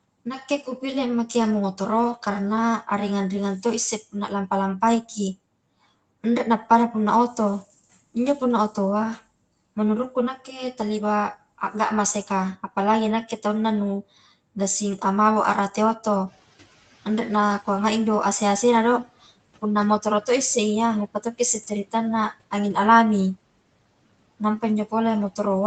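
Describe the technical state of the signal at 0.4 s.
At 0.4 s the speech comes through intact, with no audible fault in the signal at that point.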